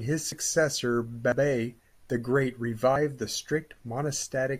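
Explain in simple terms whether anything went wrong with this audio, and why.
A dropped buffer (overrun) is heard at 0.32, 1.32 and 2.96 seconds. Each time the speech jumps ahead slightly, as if a sliver of sound, roughly 40 milliseconds, were snipped out and the two ends glued together, with no gap of silence. The likely cause is the recording program falling behind, so the hardware wrote new sound over a chunk before it could be saved.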